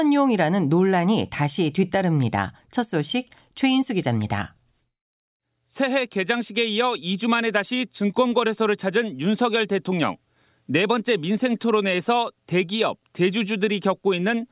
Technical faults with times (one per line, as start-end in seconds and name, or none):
none